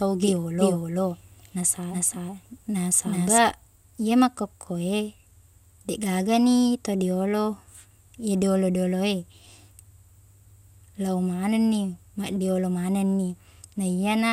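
From the very start until 3.4 s, the speech is heard twice: a doubled audio track, most likely from a second, slower capture path or an edit that leaves two copies out of step, mixes in a duplicate trailing the original by roughly 400 ms at about the same level. The copy is full-band and dry, without any room colour or decay, so every syllable gets a clean, equally loud repeat. It stops abruptly at 3.4 s.

From 2.39 to 2.46 s, overlapping the doubled section, DAB burbling appears. Weak reception let bit errors slip past the error correction into the MP2 audio data, corrupting samples. Over this short stretch, which hits seven frames at a bit error rate of about 0.15%, the wrong samples put short blips of noise into single sub-bands laid over the speech.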